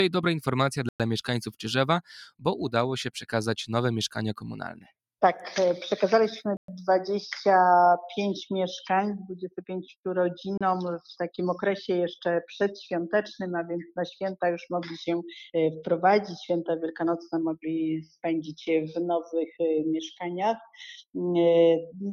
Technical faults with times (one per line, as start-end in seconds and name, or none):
0.89-1.00 Bluetooth stall
4.73-4.91 sound cut by the noise suppressor
6.57-6.68 Bluetooth stall
10.57-10.61 Bluetooth stall